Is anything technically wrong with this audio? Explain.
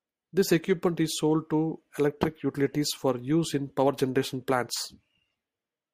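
Yes. From 0.61 to 1.11 s, just before "sold to electric utilities", three CD scratch ticks occur: a disc blemish exceeds error correction each revolution, leaving brief sub-millisecond clicks.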